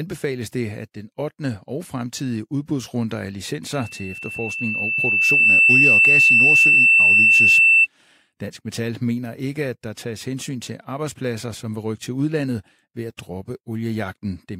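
Loudspeaker feedback squeal runs from 3.73 to 7.87 s in this speech recording: a single tone at 2.7 kHz swells over roughly two seconds until it stands about 15 dB above the speech. The microphone is hearing the loudspeaker it drives, and at that one frequency the gain around the loop tops unity, so each pass through the system reinforces the tone until it takes over the sound.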